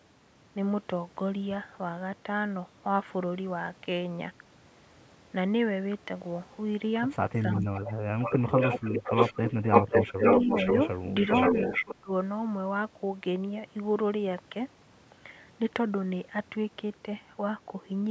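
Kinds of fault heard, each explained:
Echo leak: a copy of the speech returns about half a second late, from faint to full level, likely an echo canceller missing loudspeaker pickup.
Speech suppressed in double talk: the speech dips sharply, by about 25 to 30 dB at worst, while the echo overlaps, likely the canceller turning both down.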